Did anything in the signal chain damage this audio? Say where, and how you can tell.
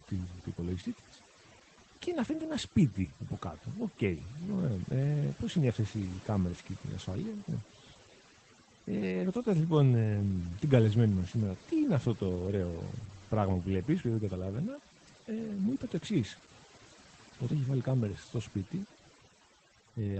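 Yes. At the call-processing stage, overdone noise removal runs through the whole speech clip. The background drops and breaks up into twinkling specks, because a suppressor set too hard is cutting individual frequency bands wherever they approach its noise estimate.

At the codec stage, Opus voice compression in SILK wideband mode is plainly audible throughout. Nothing sits above 8.6 kHz, and the speech sounds muffled, hoarse and faintly robotic from coarse excitation coding, which fits a low bitrate around 12 kbps.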